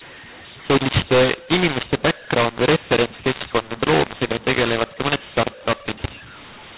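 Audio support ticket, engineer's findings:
mu-law and A-law mixed up, throughout. Harsh, gritty speech, uneven levels, pauses filled with hiss. Decoder stage: A-law G.711 stream expanded with the mu-law curve, so sample levels are misassigned and near-silent values are pushed well above zero.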